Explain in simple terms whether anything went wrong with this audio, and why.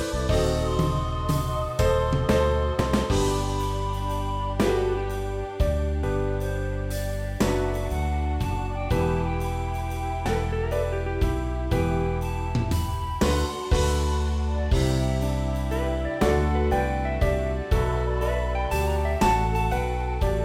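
Three times, at 2.80, 6.03 and 10.26 seconds, the audio briefly jumps ahead. This is compressed frames skipped. Each jump drops about a fifth of a second, which fits several missing 32 ms frames.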